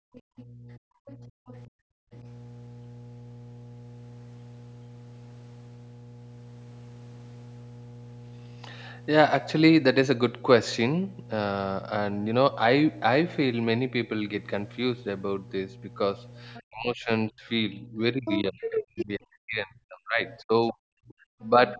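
A steady 60 Hz mains hum runs under the whole recording, a low constant tone sitting only moderately below the speech. Its fixed pitch, unchanged through pauses, separates it from rumble or handling noise, and it persists despite the call microphone processing that removes the deepest bass and leaves nothing above 8 kHz.

From 0.0 to 0.51 s the background is gated by the echo canceller. The room sound falls by about 40 dB for roughly 0.4 s in total, then returns. It is a drop in ambience, not in the talker.

The other side's voice leaks through from 0.15 to 1.59 s, again at 16.54 to 16.62 s, 18.25 to 19.05 s, 20.28 to 20.72 s and 21.72 to 21.76 s. It is likely loudspeaker echo the canceller missed. It is a second voice, faint except at 18.25 s, where it is nearly as loud as the talker.

Speech is suppressed in double talk from 0.79 to 2.13 s and from 16.68 s to the end, likely because both sides spoke at once. 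Over about a second early on and about three seconds later, the talker's own voice dips by as much as roughly 40 dB or cuts out in pieces, unlike the background-only gating at the start.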